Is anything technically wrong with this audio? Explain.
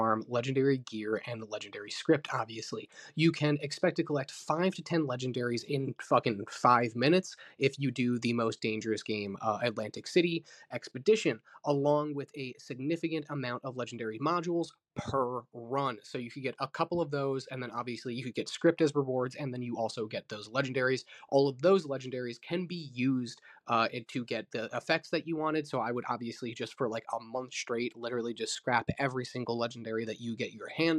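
No, nothing technically wrong can be heard in this audio. No faults of any kind stand out at any point in the recording.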